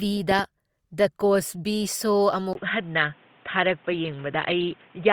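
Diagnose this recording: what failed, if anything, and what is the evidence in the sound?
Two sharp pops between 0.31 and 0.41 s, peaking roughly 10 dB above the speech, are a loud pop, likely a voltage transient in the analogue wiring from a plug or static. The speech continues underneath, which distinguishes it from a dropout or buffer glitch that would interrupt the sound.

At 2.53 s a 20 ms silence is followed by dull, boxy speech with nothing above 3.8 kHz and a new noise floor about 30 dB down, with no loudness change to the end. The input was likely switched to a poorer device at the driver level. The gap and changed noise distinguish it from a codec narrowing the band.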